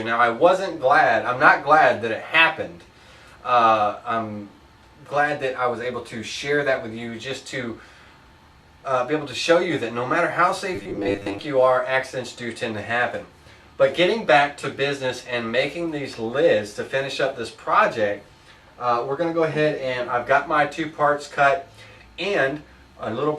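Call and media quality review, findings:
Corrupt frame decoded, 1.89–1.92 s and 14.62–14.66 s: brief chirp-like blips. Decoder played damaged compressed data spanning a couple of frames, misplacing energy across frequencies.

Robotic sound from repeated short buffers, 10.75–11.40 s: rigid 100 Hz metallic buzz. Likely playout starvation, with roughly half the audio replaced by repeats of a 10 ms buffer.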